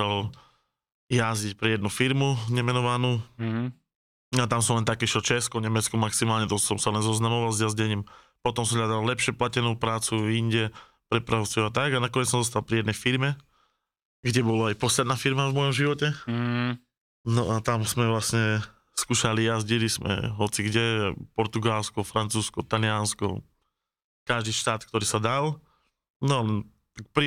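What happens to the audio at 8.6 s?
At 8.6 s the speech carries on cleanly, with no dropout, click, distortion or other technical fault at that point.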